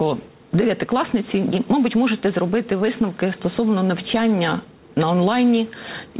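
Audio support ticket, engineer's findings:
No faults found in the clip. The call path is working as expected, with band-limiting at 4 kHz and the usual coding noise of a narrowband telephone codec, consistent with G.711 mu-law at 64 kbps.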